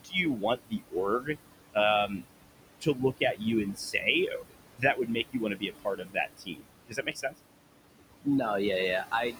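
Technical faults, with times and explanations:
Throughout, noise suppressor artifacts: the room noise, sitting only about 11 dB below the speech, is pulled down by about 21 dB wherever the suppressor judges a band to be steady noise, frame by frame. Between phrases the background sinks away, then swells back underneath the speech as the words return.
0.00–1.38 s, 2.07–2.22 s, 2.81–3.42 s, 3.73–7.35 s and 9.11–9.39 s, speech cut by the noise suppressor: in each span the suppressor mistakes quieter parts of the speech for background and turns them down with it, by up to about 22 dB at the opening and in the long middle stretch, about 9 dB near 2.1 s, about 17 dB near 3 s and about 18 dB at the end. Affected portions total well over two seconds, most of it between 3.73 and 7.35 s, leaving soft sounds and endings swallowed or faint.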